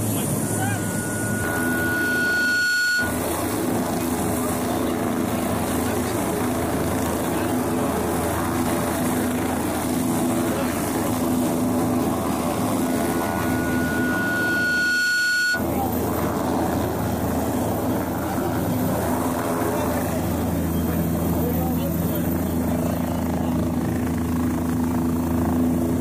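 A single 1.5 kHz tone swells over about two seconds into a squeal, reaching roughly the level of the surrounding sound, from 0.42 to 3.23 s and again from 12.81 to 15.66 s. This is loudspeaker feedback squeal: the microphone re-amplified its own loudspeaker until that frequency took off.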